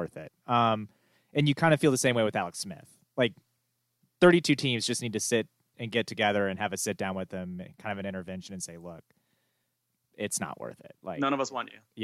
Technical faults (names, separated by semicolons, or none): none